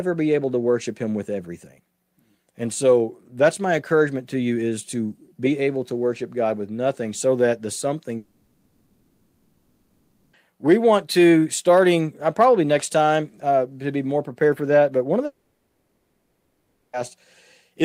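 After "nothing so that the", from 8.17 to 10.36 s, the audio gives way to a fading buzz or hiss until "we want to starting". After "one of", it happens again from 15.25 to 16.96 s. Each is likely a long network dropout: the receiver stretched the last sound across audio that never arrived and is lost.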